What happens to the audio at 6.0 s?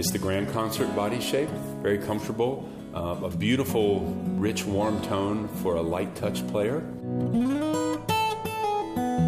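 Nothing goes wrong at 6.0 s: the audio plays through that moment intact, with no dropout, click, glitch or other fault.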